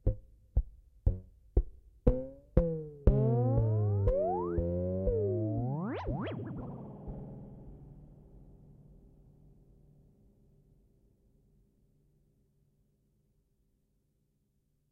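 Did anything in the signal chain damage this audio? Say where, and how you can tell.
No, nothing along the chain seems to have damaged this audio, and there's nothing here that points to any stage of the signal path acting up.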